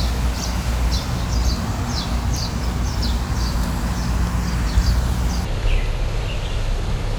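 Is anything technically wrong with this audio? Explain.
Yes. From 5.45 s to the end, a section at the wrong speed plays at 0.584x, roughly ten semitones lower, likely from a wrong clock. Pitch and pace drop together, unlike a pure pitch shift.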